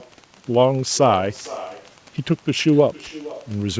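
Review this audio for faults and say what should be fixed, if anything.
Wi-Fi interference runs through the whole speech clip as a steady tick about ten times a second, spaced at 102.4 ms. A nearby Wi-Fi radio's beacon is being rectified by the audio circuit, leaving the ticking about 35 dB below the speech. Keeping Wi-Fi radios away from the microphone and preamp, or shielding and RF-filtering the input wiring, would prevent it.

An echo with no canceller is also present throughout. The far end's loudspeaker feeds its own microphone, and nothing removes that pickup. Each phrase returns roughly half a second later, about 17 dB down and thinner. The band-limited G.722 path, with nothing above 8 kHz, carries this copy. Enabling acoustic echo cancellation at the far end, or having that side use headphones, would stop it.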